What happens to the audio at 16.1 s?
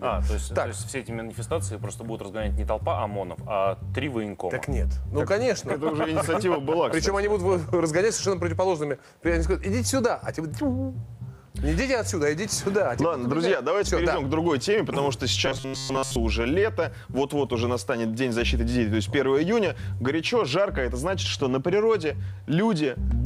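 Robotic sound from repeated short buffers runs 15.46 to 16.16 s: likely looping of an approximately 7.5 ms slice over most of the audio imposes a metallic 134 Hz buzz.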